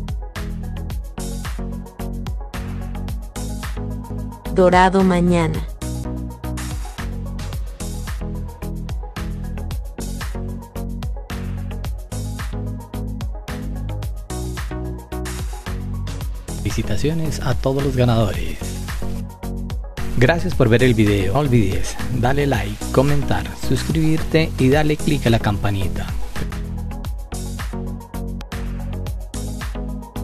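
Three brief glitches occur in the audio, at about 10.03 s, 21.34 s and 28.4 s. Each is damaged data in a compressed stream: corrupted bytes throw the decoder off sync, and it garbles those frames until it locks onto the next header.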